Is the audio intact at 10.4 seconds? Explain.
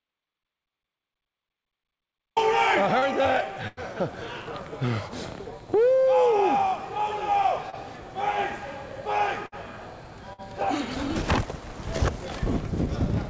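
No. A burst of packet loss runs from 10.33 to 10.41 s. The receiver stretches the last sound for about 51 ms, fading it, then resumes with 60 ms missing.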